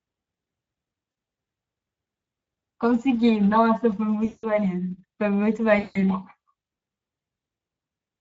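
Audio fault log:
throughout — Speex codec: the speech sounds hoarse and grainy because CELP coding at a middle rate, which fits roughly 17 kbps, leaves too few bits for the excitation. A spectrogram shows smeared harmonics, with only shaped, noise-like fill above 4 kHz.
1.11–1.15 s, 4.25–4.59 s, 5.79–5.98 s — VoIP packet loss concealed by the speech codec: gaps of 40, 180 and 160 ms are filled by the decoder extending its last pitch and filter at falling gain. This produces a stretched sound that fades, with a decaying waveform envelope and a frozen spectrogram pattern.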